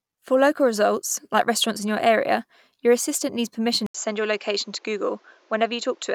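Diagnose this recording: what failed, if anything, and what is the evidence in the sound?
At 3.86 s the audio drops out for 80 ms, and when the speech comes back it's duller, with nothing above 7.6 kHz and a new, quiet noise floor sitting well under it. The loudness barely moves. That pattern points at the capture side, at the driver or device-routing level. The likely cause is an input switched to a poorer device: the system flipped to another mic or a headset profile with a narrower band and its own hiss, and stayed there to the end.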